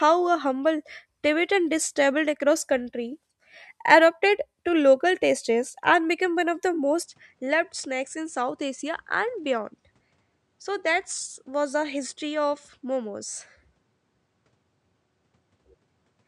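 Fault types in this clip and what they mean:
Input switched to a poorer device: From 7.03 s to the end, the speech abruptly loses its top end, with nothing above about 10 kHz, and the level drops by a few decibels. A new, faint background noise sits roughly 40 dB below the speech, and there is no gap at the change. The likely cause is that the recording input moved mid-take to a lower-grade microphone or headset with a narrower band and its own noise floor.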